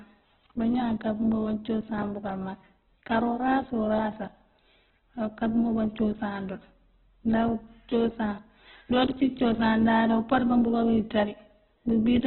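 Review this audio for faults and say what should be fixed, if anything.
Opus compression, throughout: nothing above 4.2 kHz and a rough, grainy texture, likely Opus near 8 kbps filling starved bands with noise. Encode at a substantially higher Opus bitrate, or keep an uncompressed master, so the full bandwidth and clean tone survive.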